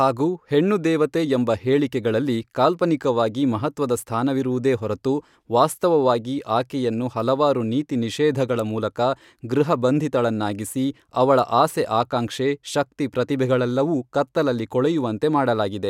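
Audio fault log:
No faults heard anywhere in this speech recording.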